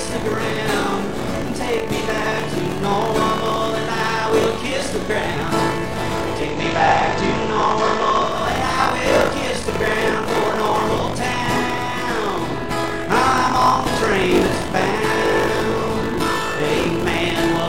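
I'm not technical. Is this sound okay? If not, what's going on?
No. Buffer tearing runs all the way through: a steady robotic buzz, 50 times a second, that stops in silent gaps, unlike mains hum.

From 6.31 to 8.45 s, digital radio blending to FM analogue: the sound turns slightly hissy, fading over about a quarter second, without getting quieter.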